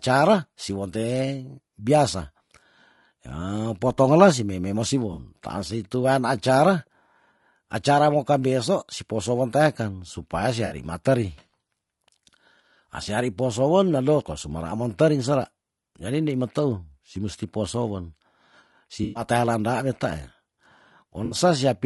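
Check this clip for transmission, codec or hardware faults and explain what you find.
Two faults are present: codec damage across the whole clip, and four short dropouts patched over by the decoder.

Low-delay AAC compression runs throughout. The speech sounds rough and grainy, with noise between harmonics and a thin, synthetic top. Short low-delay frames resolve pitch poorly. The damage likely comes from AAC-ELD at a low bitrate, around 32 kbps.

AAC frame loss with concealment occurs at 5.13–5.19 s, 10.65–10.75 s, 19.03–19.23 s and 21.25–21.35 s, losing 40, 60, 120 and 60 ms. The decoder rebuilt each gap from the last good spectrum. Each sounds like a brief smeared, noisy patch. The 19.03 s gap is longest.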